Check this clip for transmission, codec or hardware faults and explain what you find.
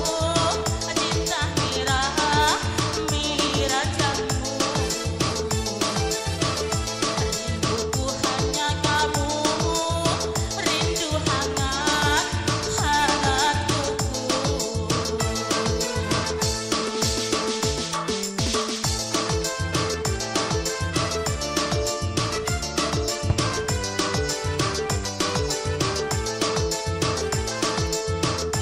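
Nothing in the transmission, codec or hardware path registers as a fault on this clip.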